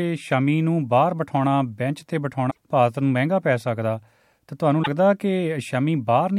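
Damaged data in a compressed stream at 2.47–2.57 s and 4.80–4.88 s: corrupted bytes make the decoder misread frames and resynchronise, producing brief glitches.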